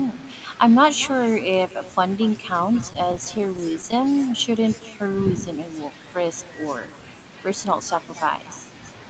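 From the very start there's an echo with no canceller: your own speech comes back roughly a fifth of a second later, about 21 dB down. Someone on the far end is on a loudspeaker, their mic catches the playback, and nothing strips it out before it returns. So every phrase has a faint, thin shadow trailing just behind it. Within the call's 8 kHz bandwidth that shadow runs the whole way through.

Between 2.81 and 4.13 s you get repeated stalls, a stutter. Packets were arriving late, so the jitter buffer kept running dry, 22 tiny times across that stretch, none longer than 12 ms. Each time, the receiver stretched the last bit of sound to bridge the hole. That adds up to 211 ms of filled-in audio, roughly a sixth of the span, with nothing actually lost. It comes across as a dragging, catchy flutter.

Then from 4.90 to 5.42 s there's a jitter buffer slow-down. The buffer was running low, so the receiver padded it by repeating single pitch periods over and over. 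That adds 63 ms and drops playback to 90% speed without shifting pitch. The speech sounds a touch drawn out and lazy there, with sounds held a little longer than natural and maybe a faint wobble.

Last, at 7.49 to 7.81 s, a jitter buffer speed-up goes the other way. Too much audio had piled up in the buffer, so the receiver snipped out short pitch-period slices to cut the delay, around 40 ms in total. Playback jumps to 110% speed at the same pitch, so that brief bit sounds hurried, as if the talker suddenly rushed the phrase.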